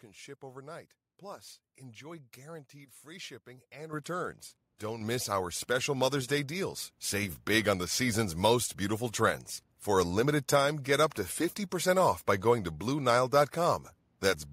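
Automatic gain control on the call side judged the microphone too quiet and raised the device's input volume, producing a microphone volume stepped up fault four times: at 3.93 s by about 10 dB, at 5.01 s by about 5 dB, then at 6.03 s and 7.23 s by about 2 dB each. Each change is instant, so the speech and the room behind it jump louder together at those moments. The first step is a clear lurch, and the later ones are smaller steps.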